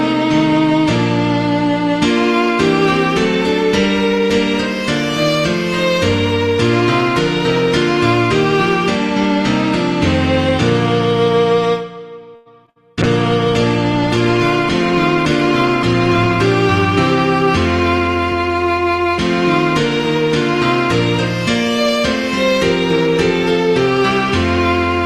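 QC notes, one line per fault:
12.35–12.48 s, call audio freeze: the sound stops moving forward and its last moment is stretched into a fading buzz or hiss for about 100 ms. It then carries on exactly where it left off, nothing skipped, which separates it from packet loss. The likely cause is held-up packets draining the jitter buffer.
12.66–12.70 s, short concealed packet loss: about 20 ms of audio is missing and was patched by extending the preceding sound, heard as a brief smear or wobble. It is shorter than the burst that immediately follows.
12.70–12.78 s, burst of packet loss: 60 ms in a row never arrives in time, so the last sound is held as a buzz or hiss that dims across the gap. Playback then resumes further along, with that span gone rather than delayed as in the freeze.
13.03–16.51 s, call bitrate drop: the encoder falls from 48 to 18 kbps and sits at its lowest for about 3.4 s. 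Coarser coding makes the sound rough and watery, with the top end trimmed. It is a sustained change in tone that clears by 16.51 s, not a dropout.
18.00–18.55 s, jitter buffer speed-up: to shed surplus buffered delay, the receiver cuts short pitch-period-sized slices repeatedly, roughly 70 ms in total. Playback runs at 111 % speed with pitch unchanged, sounding hurried. This distinguishes it from a resampling error, which would also raise pitch.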